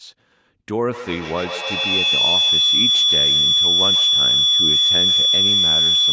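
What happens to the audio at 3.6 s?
Two devices in the same room are on this call, so the loudspeaker's output re-enters the microphone and gains level with each trip around the loop. At 3.6 s that feedback howl is under way. It begins at 0.92 s and continues to the end of the clip, with repeats that build instead of decaying and narrow into a tone near 3 kHz. The loop repeats roughly every 150 ms and the howl peaks about 8 dB above the speech.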